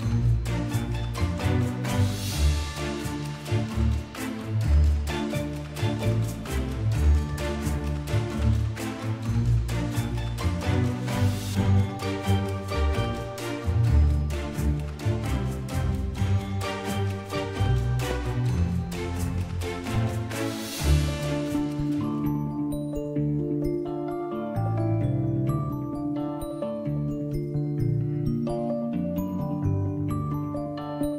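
Loud pops at 18.11–18.13 s and 19.87–19.89 s, each a single sharp click roughly 10 dB above the sound, likely from brief voltage spikes.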